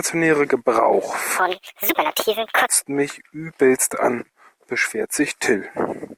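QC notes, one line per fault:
1.39–2.69 s, section at the wrong speed: the speech suddenly runs about 1.59 times too fast, so it sounds hurried and jumps up roughly seven semitones before snapping back. Speed and pitch shift together, likely from this stretch being played against the wrong clock.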